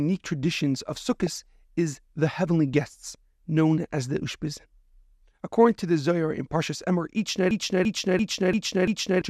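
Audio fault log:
1.12–1.41 s, DAB burbling: Weak reception lets bit errors slip past error correction. Corrupted samples put short blips of noise in single sub-bands.
7.51–9.22 s, system hang loop: The system froze while playback kept cycling one 341 ms buffer. It repeats five times at 2.93 Hz, like a machine-gun stutter.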